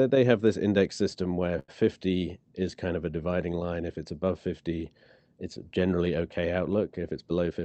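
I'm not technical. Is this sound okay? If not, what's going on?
No. At about 1.59 seconds, right after "this index system where", the sound briefly hangs: a sound is held a little too long, with a slight buzz or dip, for roughly a tenth of a second until 1.70 s. This is a short stall from a late packet. A piece of the call audio arrived late, so the receiver stretched the last sound to fill the gap and then carried on. Nothing is lost, but everything after it plays slightly later.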